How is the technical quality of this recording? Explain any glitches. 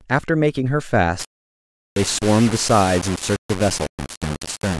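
The technical quality is poor from 1.19 s onward. The first second or so is not affected by this fault.

From 1.19 s to the end of the clip, the speech has low bit depth without dither. It fits a signal reduced to about 4 bits and rounded to the nearest step. The likely cause is requantisation with no dither added. The rounding error tracks the voice, so it sits only roughly 10 dB below it. Quiet syllables turn harsh and grainy. The faintest parts sputter between two levels or drop out. The distortion shifts with every sound.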